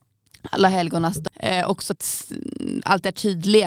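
Speech, with a sudden lurch forward right after "alla helgonas": at 1.27 to 1.29 s the sound jumps ahead with no pause or fill, so about 0.7 s of speech is simply missing and the two sides butt almost directly together. This is a skip ahead. Later audio was already waiting, and a stretch in between was discarded, either lost in transit or dropped by an overflowing jitter buffer, cutting the playback delay by roughly the same amount in one step. Then, from 1.55 s to 3.65 s, the speech sounds slightly rushed, running at about 107 % of normal speed while the pitch stays put. That is jitter buffer speed-up. The receiver was holding more audio than its target and trimmed tiny slices, one or a few pitch periods each, over and over, shaving off roughly 150 ms in total to pull the delay back down.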